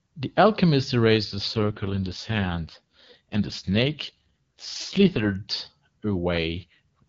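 At 1.47 s the speech turns rough and buzzy, staying that way until 5.35 s, then does so again from 6.58 to 7.04 s. This is an AMR rate drop: the codec falls back to a much lower rate, with the raspy texture fitting roughly 6.6 kbit/s against the clean 23.85 kbit/s wideband level heard between. Unlike a narrowband fallback or packet loss, the bandwidth stays intact and nothing drops out; only the texture degrades.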